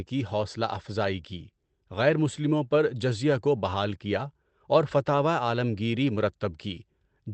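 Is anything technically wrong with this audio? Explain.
No, nothing's actually wrong here: the speech just has the slightly soft, band-limited character of an ordinary call codec, with the top end stopping around 8 kHz as you'd expect from a lowish-bitrate Opus setting, and that's the path doing its normal job.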